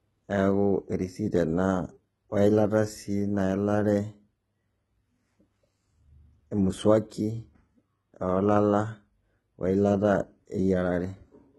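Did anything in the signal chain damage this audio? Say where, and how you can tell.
Yes. HE-AAC compression runs through the whole speech clip, and the damage points to the codec stage. The treble is likely resynthesised by spectral band replication: lower bands are copied upward and shaped by a coarse envelope, so the s sounds come out gritty and metallic rather than crisp. The damage is heavy, nothing reaches above 11.8 kHz, and that fits a very low bitrate of around 16 kbps.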